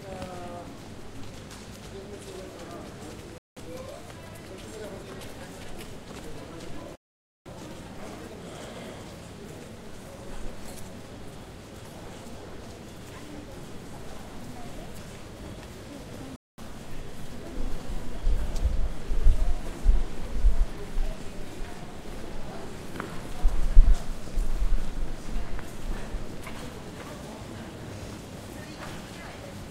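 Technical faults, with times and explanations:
3.38–3.57 s, 6.95–7.46 s and 16.36–16.58 s, Bluetooth stall: the sound cuts to silence for 0.19, 0.5 and 0.22 s, then resumes, likely because the headphones' buffer ran dry while delayed packets were resent.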